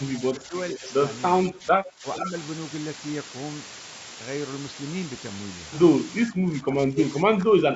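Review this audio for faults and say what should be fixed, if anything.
Low bit depth with dither runs through the whole clip as a constant, even hiss only about 5 dB below the speech, with no grainy distortion. The sound points to roughly 4-bit quantisation with dither spreading the rounding error into white noise. On a spectrogram it is a flat, uniform haze filling every band up to the 8 kHz limit of the call path. On a waveform there is a thick noise floor in the gaps. Prevent it by keeping at least 16 bits through every processing and conversion stage.

Speech suppressed in double talk is heard as the speech dipping at 0.33–0.54 s and 0.75–0.87 s (about 10 dB), at 1.49–2.24 s (about 15 dB) and from 6.29 s to the end (about 20 dB). This is likely an echo canceller attenuating the near talker while the far side spoke. The waveform envelope sags in those stretches. Prevent it by tuning the canceller's double-talk detection so it holds the near talker's level when both sides speak.

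Echo leak appears as a faint, delayed copy of the speech at 0.72–0.92 s (about 15 dB down) and 2.15–2.28 s (about 10 dB down). It trails the original by about 460 ms, likely residual loudspeaker pickup that the far end's canceller missed. A spectrogram shows ghost harmonic patterns repeating the earlier speech at that offset. Prevent it by improving far-end echo cancellation or using a headset there.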